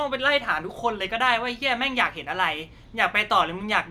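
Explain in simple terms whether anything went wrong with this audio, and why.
Nothing went wrong with this audio that a listener can hear, because no glitches, dropouts or distortions turn up anywhere in the recording.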